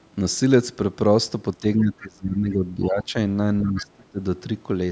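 From 1.6 to 3.15 s, the speech is pushed down by around 20 dB, and again from 3.62 to 4.21 s, by around 25 dB. This is speech suppressed in double talk. The echo canceller likely mistook both sides talking at once for echo and muted the talker. The voice fades and breaks up.

At 3.76 to 3.84 s, a brief scrap of the other side's voice leaks through, roughly 15 dB below the speech. It is likely residual loudspeaker echo the canceller missed. It sits within a band that stops near 8 kHz.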